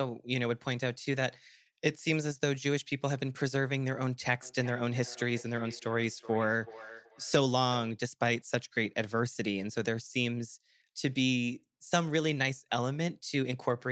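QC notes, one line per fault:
4.42 to 8.01 s, feedback echo between two devices. The sound returns roughly every 0.4 s, at most about 18 dB below the speech. A second device in the room replays this microphone's signal, and the microphone captures it again. Its echo canceller cannot remove the other device's playback.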